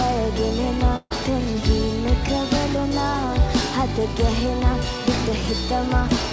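At 0.96 s a burst of packet loss breaks the sound until 1.12 s. About 140 ms of audio never arrived in time to be played. The receiver covers the hole by stretching the last sound it had, for roughly 140 ms, fading it as it goes. A voiced sound becomes a held buzz, and anything else becomes a thinning hiss. Near the end it drops to silence for about 30 ms. Then the sound picks up further along, with that stretch missing. Throughout, the call path leaves nothing above 8 kHz, which fits G.722 at 64 kbps.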